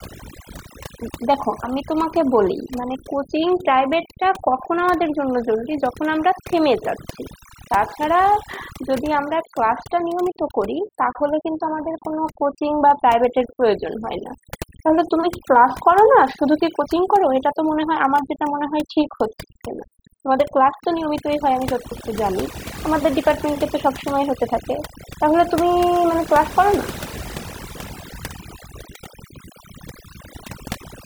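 From start to finish this speech has overdone noise removal: the reduction was set so hard that bands near the noise floor get switched off, taking the quieter parts of the voice along. You hear near-silent gaps with twinkly specks.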